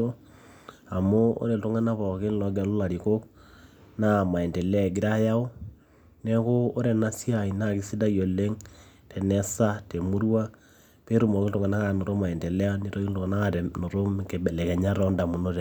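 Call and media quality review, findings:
Nothing to flag on this speech recording; no faults turned up anywhere in it.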